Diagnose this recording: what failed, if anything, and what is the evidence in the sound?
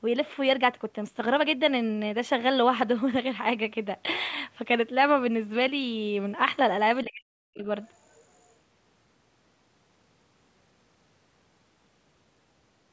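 Between 7.05 and 7.64 s the speech drops sharply, by around 40 dB at its deepest, over about half a second in total. This is likely speech suppressed in double talk: the call-processing echo canceller misread simultaneous talk as echo and attenuated the near-end signal along with it.

From 7.87 to 8.53 s a faint second voice sits underneath, roughly 35 dB below the main speech. The other side's voice is likely leaking through because the echo canceller in the call processing left a residual of the loudspeaker signal in the microphone path.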